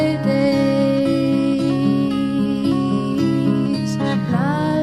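Whole compressed frames never reached playback, missing or rejected by the decoder as damaged. At 4.29 to 4.33 s the audio jumps ahead roughly 0.3 s, consistent with about seven 42.7 ms frames.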